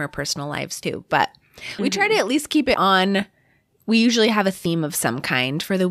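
At 0.83 s (after "personal lives", before "but we"), 1.79 s, 2.74 s (after "at least keep") and 4.65 s (after "usually have a"), the speech skips by about 40 ms, likely audio missing between chunks roughly each second. Waveform and spectrogram show abrupt seams, no silent gap.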